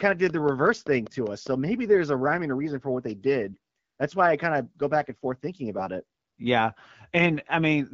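From 0.10 to 1.48 s, a train of clicks ticks evenly about five times a second, roughly seven clicks peaking about 5 dB above the speech, likely from electrical interference.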